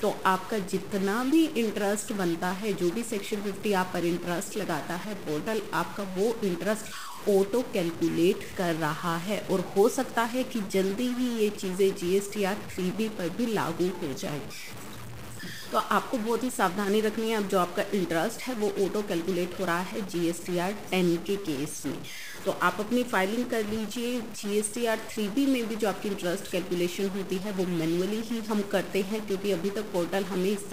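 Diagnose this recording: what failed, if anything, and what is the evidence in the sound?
A stuck bit runs through the whole recording. Harsh, buzzy distortion sits on everything, and gaps that should be near silent are filled with gritty noise. The cause is likely a converter or data line holding one bit fixed, so about half the samples are offset by a step of about -35 dBFS that flips with small changes in signal sign. A waveform shows square-edged jumps at low levels; a spectrogram shows broadband haze through the pauses.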